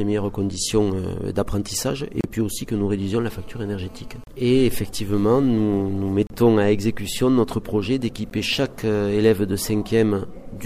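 At 2.21–2.24 s, 4.24–4.27 s, 6.27–6.30 s and 8.30 s, hard-edged silences of 32 to 35 ms, and finally 14 ms, cut into the sound. This is a gap between stream segments: time stamps of consecutive 2-second segments fail to meet, so the player pads with silence. No audio is lost.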